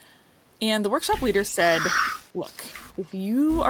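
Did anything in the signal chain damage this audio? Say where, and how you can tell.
Yes. Speech suppressed in double talk at 2.34–2.46 s and 2.96–3.05 s: the speech dips by several decibels, the second time deeper, likely from call processing ducking during overlapping talk.

Echo leak at 3.05–3.1 s: a very faint copy of the speech arrives 218 ms late, likely residual loudspeaker echo that the far end's canceller failed to remove.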